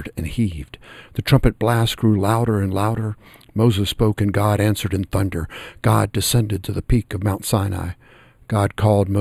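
Channel delay (comb filtering) runs through the whole speech clip. One channel arrives roughly a tenth of a millisecond late, which fits an offset of only a few samples. When the two channels are summed to mono, the parts they share cancel at evenly spaced frequencies. The first deep notch falls around 5 kHz, with the next near 15 kHz. The speech sounds hollow and phasey, with a dulled, scooped-out upper range that stays fixed throughout.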